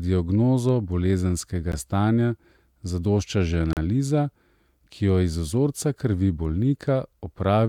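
At 1.72 s and again from 3.73 to 3.77 s, the speech breaks into hard-edged silence: gaps between stream segments. Timestamps on consecutive 2-second segments leave holes of about 14 and 37 ms, filled with silence.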